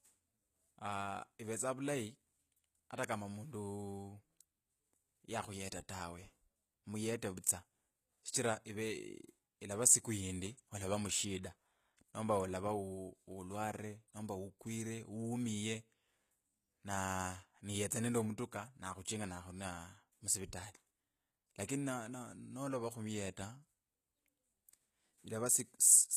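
Speech, with HE-AAC compression audible throughout: s sounds turn gritty and lispy because the treble is rebuilt from copied lower bands, likely a low-bitrate HE-AAC encode around 20 kbps. A spectrogram shows blocky, repeated upper bands and nothing above 14.9 kHz.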